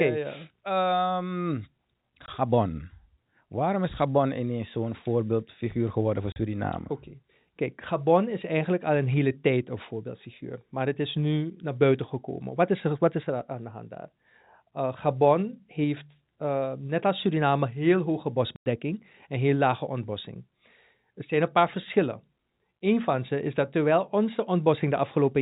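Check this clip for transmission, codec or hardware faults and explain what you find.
Packet loss filled with silence occurs three times, at 2.26 to 2.28 s, 6.32 to 6.36 s and 18.56 to 18.66 s. Missing packets were replaced with digital silence, leaving hard-edged gaps of 20, 40 and 100 ms. The gap lengths fit a 20 ms packet. The telephone-band G.711 coding carrying the speech can be heard under it all.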